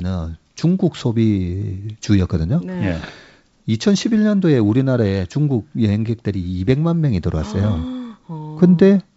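Around 3.02 to 3.11 s, and again from 7.62 to 7.67 s, you get bit errors on an ADPCM link: a sharp pop and a short rough burst with a quick jump in level. The flipped bits knock the decoder's step size and predictor off track, so each hit rings on for some milliseconds before the decoder recovers. The rate looks like a few tenths of a percent. Outside those spots, the G.722 wideband coding sounds clear up to about 7 kHz.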